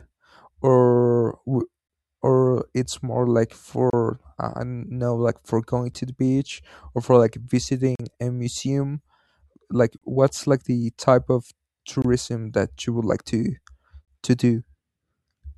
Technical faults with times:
3.90-3.93 gap between stream segments
5.94 gap between stream segments
7.95-8.00 gap between stream segments
9.98-10.02 gap between stream segments
12.02-12.05 gap between stream segments
14.05-14.08 gap between stream segments

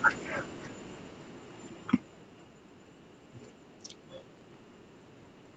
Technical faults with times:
0.05-2.62 automatic gain falling
4.18-4.58 processor overload crackle

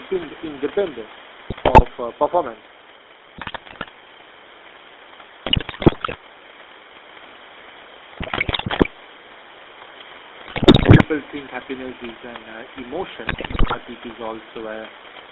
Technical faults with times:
0.00-15.31 GSM full-rate codec
1.48-1.83 GSM bit errors
3.36-3.89 GSM bit errors
5.46-6.16 GSM bit errors
8.20-8.89 GSM bit errors
10.46-11.05 GSM bit errors
13.26-13.77 GSM bit errors

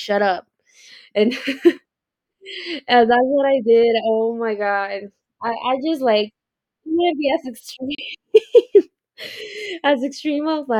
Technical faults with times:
7.95-7.99 digital broadcast dropout

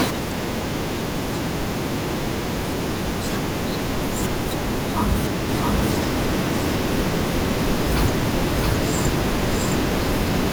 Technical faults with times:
5.49-10.52 doubled audio track

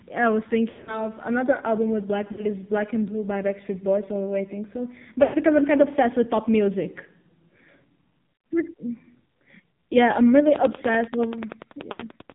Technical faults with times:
0.00-12.34 AMR narrowband mobile codec
0.70-1.07 lost AMR speech frames
2.32-2.47 lost AMR speech frames
5.24-5.37 lost AMR speech frames
11.92-12.05 lost AMR speech frames

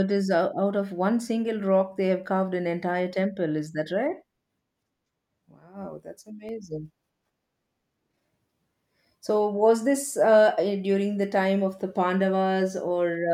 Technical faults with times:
6.49 block of digital silence

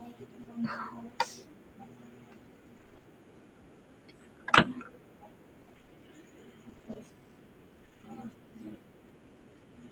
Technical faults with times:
0.43-0.47 short concealed packet loss
2.77-3.05 repeated packet loss (robotic sound)
5.61-5.93 repeated packet loss (robotic sound)
6.69-6.97 repeated packet loss (robotic sound)
7.85-8.05 repeated packet loss (robotic sound)

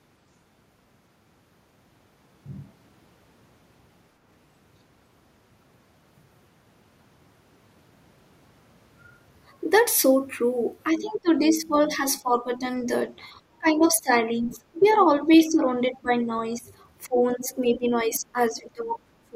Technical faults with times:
10.92-12.90 speech suppressed in double talk
11.04-11.20 other side's voice leaking through
13.58-16.69 speech suppressed in double talk
14.56-14.98 other side's voice leaking through
17.07-19.35 speech suppressed in double talk
17.43-17.78 other side's voice leaking through

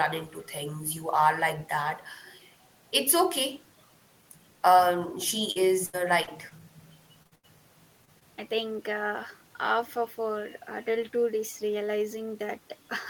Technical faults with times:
5.51-6.53 repeated packet loss (robotic sound)
7.23-7.33 short concealed packet loss
7.35-7.45 burst of packet loss
8.05-8.23 short concealed packet loss

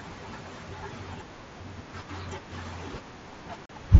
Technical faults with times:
3.66-3.70 unconcealed Bluetooth headset packet loss

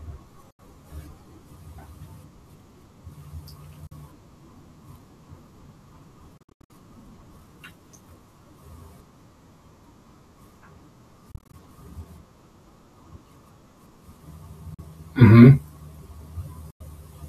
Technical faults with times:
0.50-0.59 Bluetooth dropout
3.87-3.92 Bluetooth dropout
6.37-6.70 Bluetooth dropout
11.31-11.54 Bluetooth dropout
14.74-14.79 Bluetooth dropout
16.70-16.81 Bluetooth dropout

